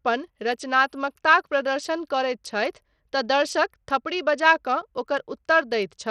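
Throughout, the speech sounds dull and gritty, its treble thinning and flickering while a coarse grain and aliasing ride along. The cause is likely Bluetooth SBC compression with a starved bit pool, consistent with roughly 80 kbps: the top sub-bands lose their bits and the rest are coarsely quantised.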